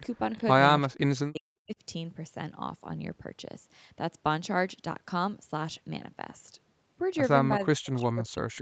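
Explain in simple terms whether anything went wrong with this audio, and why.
Something did go wrong, in two ways. First, a brief echo leak from 0.35 to 0.42 s: a faint copy of the speech comes back about a third of a second late, likely because the other side's loudspeaker was picked up by their microphone and not fully cancelled.

Second, speech suppressed in double talk: the voice drops away sharply from 0.86 to 1.47 s, again from 1.63 to 1.76 s, and from 7.59 s to the end. The likely cause is both sides talking at once, so the echo canceller turned everything down.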